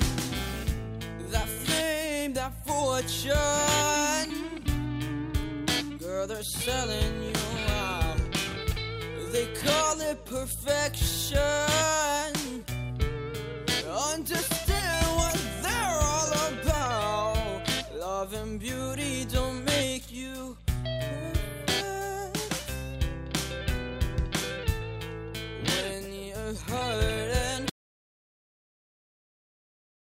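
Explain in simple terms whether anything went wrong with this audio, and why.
At 27.7 seconds the sound stops abruptly and never returns. What remains is an audio dropout to silence lasting to the very end of the clip. Unlike a natural pause or a fade-out, there is no gradual decline and no faint background hum; the track goes instantly to total, dead silence. That points to the input having likely been lost, through a disconnected device, a broken link or an accidental mute, while the recording simply carried on writing nothing.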